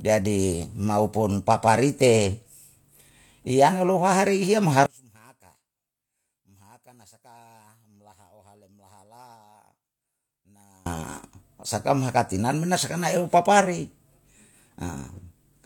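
One channel inverted, from 4.86 to 10.86 s: the speech drops by about 32 dB, background included. The likely cause is one stereo channel with reversed polarity, so the shared content cancelled when the two were summed to mono, leaving only their small mismatch.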